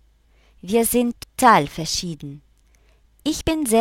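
At 1.23 s the audio jumps forward by roughly 150 ms, and at 3.41 s by about one frame's worth. That's compressed frames being skipped, which fits 32 ms frames going missing.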